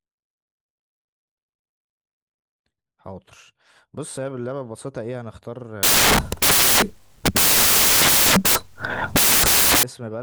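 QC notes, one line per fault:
5.83–9.83 s, samples built from the wrong bytes: for these four seconds the reader assembles each sample from misaligned or swapped bytes, so the rapidly fluctuating low-order bits land in the most significant position and dominate every value. The speech is replaced by loud, harsh broadband noise, before correct byte framing returns at 9.83 s.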